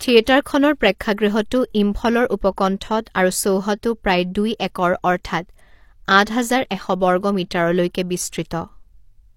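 At 3.72 s the speech breaks into a brief glitch lasting about 60 ms, ending at 3.78 s, just before "প্ৰায় দুই একৰ". This is damaged data in a compressed stream. Corrupted bytes made the decoder misread frames, lose sync and hunt for the next valid frame.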